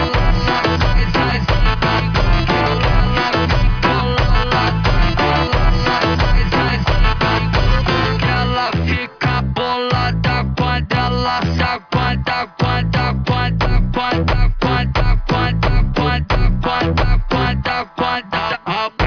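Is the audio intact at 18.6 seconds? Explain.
Yes, the audio is intact at 18.6 seconds, with no dropout, click, distortion or other technical fault at that point.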